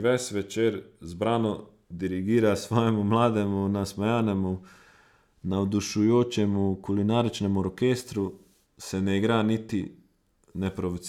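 Nothing stood out as a technical fault at any point while listening to the speech in this recording.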